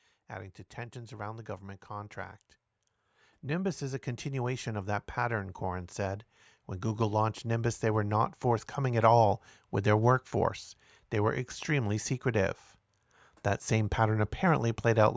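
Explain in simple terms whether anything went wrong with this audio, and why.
Automatic gain rising happens twice: briefly from 0.34 to 2.45 s, then much more strongly from 3.43 to 12.52 s. The system judged the incoming sound too quiet and kept turning its own volume up little by little. Because it boosts everything it receives, the speech and the background noise behind it swell together. The second rise is long and large, so the sound grows noticeably louder over those nine seconds.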